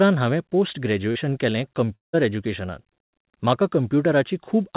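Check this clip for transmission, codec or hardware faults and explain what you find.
Two reception faults are audible in this speech, both heard through a narrowband call path where nothing rises above 4 kHz, which fits G.711 mu-law at 64 kbps.

From 1.12 to 1.17 s, just after "हांवें पोस्ट", there is a brief smear and wobble where the sound blurs for an instant. This is short concealed packet loss. About 40 ms of audio arrived too late for the decoder, and the receiver covered roughly 32 ms of that gap by extending the preceding sound before blending back into the real signal.

From 1.95 to 2.15 s the sound stretches into a fading continuation of itself, then thins to near silence before the audio returns further on, with that stretch simply missing. The likely cause is a long network dropout. For about 0.18 s no audio reached the receiver, so it prolonged the last sound as a decaying fill until it gave way to silence. 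Playback then resumed at the next audio to arrive, without the lost portion.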